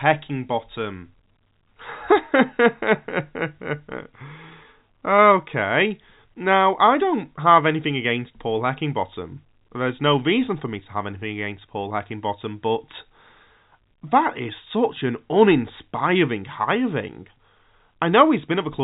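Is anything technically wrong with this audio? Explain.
No, nothing is technically wrong: this is speech carried over G.711 A-law telephone coding at 64 kbps working as that format should, with nothing above about 3.8 kHz and only the faint level-following hiss that its 8-bit logarithmic scale leaves under the signal.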